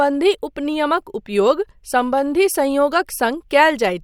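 Nothing in the speech stood out as a technical fault on listening.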